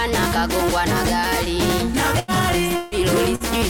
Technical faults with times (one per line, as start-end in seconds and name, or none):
2.19-2.31 burst of packet loss
2.76-2.94 long network dropout
3.35-3.43 burst of packet loss